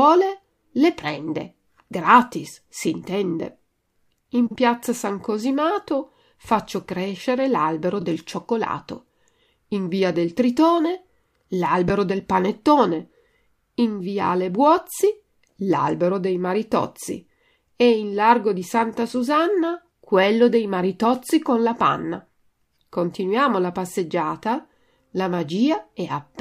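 Speech, with three spots of frames out of order at 4.46–4.56 s, 7.99–8.04 s and 11.88 s. Neighbouring blocks got swapped, so each stretch flutters, and no time is lost.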